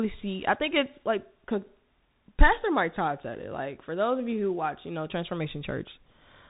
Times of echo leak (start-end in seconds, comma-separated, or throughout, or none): none